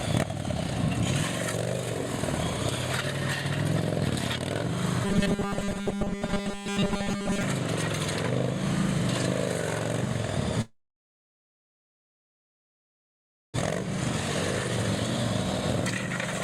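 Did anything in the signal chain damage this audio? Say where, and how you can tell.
Yes. From 5.05 s to 7.43 s the sound turns into a rigid, metallic buzz locked at 200 Hz, which fits a 5 ms block being replayed over and over. This is robotic sound from repeated short buffers, likely caused by the driver or buffer stage running short of data and looping its last block. Most of the real audio in that stretch is skipped. Unlike a codec artefact, the buzz stays at one fixed pitch rather than following the sound's own pitch.

From 10.61 s to 13.60 s there is a long network dropout. About 2.97 s of output is filler: a brief fading continuation of the last sound, then about 2.8 s of silence. When audio resumes, about 1.6 s of it is missing, likely because packets were lost on the network. The gap jumps the playback delay by roughly a second and a half. A brief packet loss would be concealed in milliseconds, but this is a long hole that decays into silence.

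From 15.37 s to the end, the sound runs at about 124% of normal speed while its pitch stays put. This is a jitter buffer speed-up. The receiver repeatedly cut out short pitch-period slices, roughly 300 ms in all, to drain excess buffered delay, probably the backlog left after the dropout. A sample-rate error would raise the pitch along with the speed, and here the pitch is unchanged, so the tempo alone is hurried.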